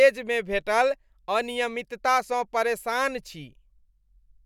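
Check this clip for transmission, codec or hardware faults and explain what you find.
No faults are audible anywhere in this speech.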